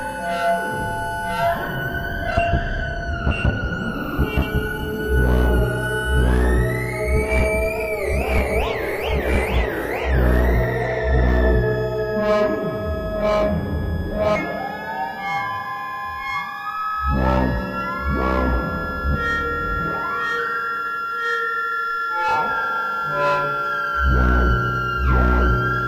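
No technical faults occur at any point in this recording of everyday sounds.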